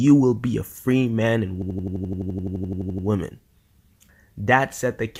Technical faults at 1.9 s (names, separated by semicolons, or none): system hang loop